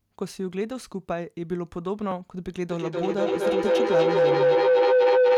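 At 2.12 s the program likely missed a buffer before the hardware overwrote it, a dropped buffer (overrun), so a tiny slice vanishes and the sound jumps ahead. From 2.67 s to the end, a microphone-to-loudspeaker loop gains on every pass, producing feedback howl near 500 Hz with a loop delay of roughly 200 ms that peaks about 9 dB above the speech.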